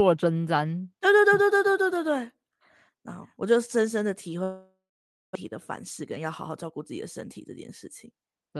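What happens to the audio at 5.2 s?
At 5.2 s the sound is inside a gap running from 4.43 to 5.37 s, likely a long network dropout. The last sound is stretched into a fading buzz, then about 0.53 s of silence. Unlike brief packet-loss concealment, roughly 0.6 s of audio never returns.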